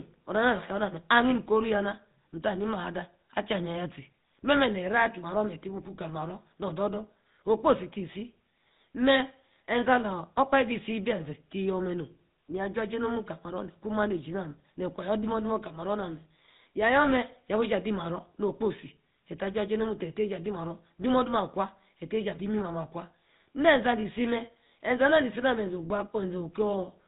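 From the first second to the end, the speech carries GSM full-rate codec damage, and it is plainly audible. The codec rebuilds the voice from a vocal-tract model excited by a sparse, regularly spaced pulse train, at a rate that fits 13 kbps, so the fine structure of the original excitation is lost. The result is a buzzy, gravelly roughness on the voice. With nothing passed above 4 kHz, the sound is also dull and narrowband.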